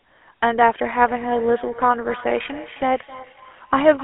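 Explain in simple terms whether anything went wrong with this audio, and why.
Yes, two things went wrong. Throughout, the GSM full-rate codec gives the speech a buzzy, gravelly roughness and cuts everything above about 3.8 kHz, unlike plain phone-line muffling, which stays smooth. From 1.03 s to the end, a feedback echo between two devices brings each word back faintly about a third of a second later, at a steady interval rather than the smeared tail of room reverb.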